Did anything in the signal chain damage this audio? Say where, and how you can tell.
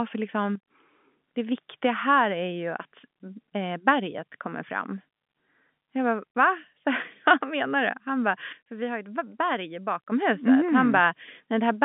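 Yes. A digital gain stage, likely in call processing, switched its setting without a ramp, causing a sudden gain jump. Level drops about 9 dB from 0.55 to 0.70 s and about 7 dB from 8.53 to 10.12 s. Speech and the telephone-band background fall and recover together, in single steps.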